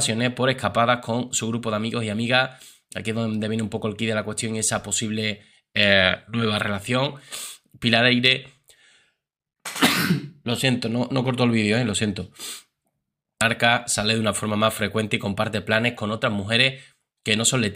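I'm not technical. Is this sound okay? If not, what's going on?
No. At 13.4 s, one chunk of the stream likely failed to load, so the player jumped straight to the next chunk. This is called a stream segment skipped: there's a small blip, then the sound leaps ahead with a stretch missing.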